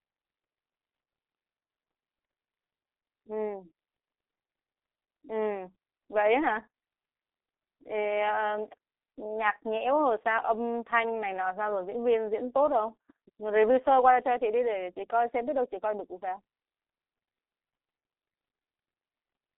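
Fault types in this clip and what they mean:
G.723.1 codec: an old internet-phone coder that squeezes speech hard. Here the speech sits in a narrow 300 Hz to 3.6 kHz band with nothing above 3.8 kHz, sounding muffled and hoarse with smeared consonants, which fits a coder running near 6 kbit/s.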